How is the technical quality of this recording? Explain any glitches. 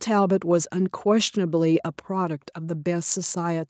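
No glitches or faults are audible.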